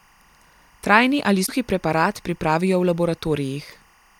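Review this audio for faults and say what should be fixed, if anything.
Timecode bleed runs through the whole speech clip: a faint chirping warble roughly 35 dB below the speech, switching between tones near 1 and 2 kHz. Linear timecode at 23.976 frames per second is leaking from an adjacent track or cable into the audio path. Keep timecode on separate, well-shielded cabling and away from audio tracks, or filter and re-record affected material.

Damaged data in a compressed stream appears at 1.43 to 1.50 s, just before "preparat pripravijo v", and again at 3.71 to 3.74 s, each heard as a brief decoding glitch. Corrupted bytes made the decoder misread frames, lose sync and jump to the next valid frame header. Verify file integrity with checksums after transfer and re-fetch or re-encode from an intact source.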